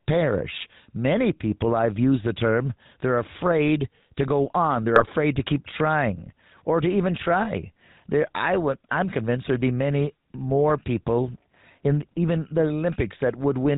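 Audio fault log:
throughout GSM full-rate codec: The speech is squeezed through a vocal-tract model driven by a regular pulse train that keeps only one excitation sample in three, and nothing above 4 kHz survives. The result is a plainly audible buzzy, gravelly grain on every syllable, with sibilants dulled and the upper voice thinned, a signature that fits the 13 kbps full-rate GSM codec rather than a wider-band coder.
4.96–5.05 s GSM bit errors: Between "afraid to go on" and "to keep trying or", corrupted bits reach the decoder and scramble its filter, pitch and gain values for a short burst of about 90 ms. The spectrum briefly warps and the level jumps, giving a squawk-like, gargling pop before clean decoding resumes. The damage points to a few consecutive 20 ms frames hit at a bit error rate near 1%.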